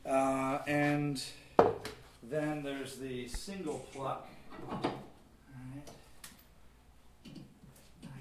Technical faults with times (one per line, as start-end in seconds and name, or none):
none